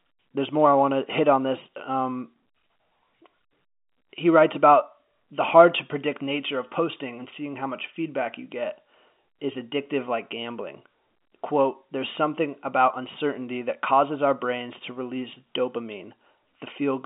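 No technical faults can be heard in the speech, which sits in the ordinary narrow band of a G.711 A-law telephone line, running from about 200 Hz up to 3.6 kHz with nothing above roughly 3.7 kHz.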